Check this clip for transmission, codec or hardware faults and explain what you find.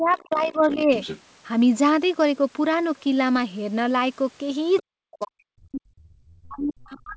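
Two faults recur: speech suppressed in double talk, and the other side's voice leaking through.

Speech suppressed in double talk occurs from 0.0 to 0.92 s, 4.8 to 5.9 s, and 6.43 s to the end. The talker dips by about 20 dB, later about 40 dB. This is likely an echo canceller turning down both sides at once.

The other side's voice leaks through at 0.31 to 1.21 s, 4.76 to 4.83 s, and 5.21 to 5.26 s. A faint second voice sits about 15 dB below the talker at first, then fainter scraps follow. This is likely loudspeaker echo the canceller missed.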